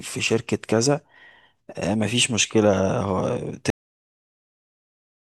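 At 3.70 s the speech has a cut-off end. The final buffers were never written. Sound stops mid-word and drops straight to digital silence.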